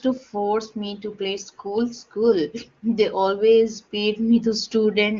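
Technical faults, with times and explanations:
Nothing here needs flagging: the speech comes across clear over what sounds like HD Voice (AMR wideband) coding at one of its higher rates, with no technical faults to point to.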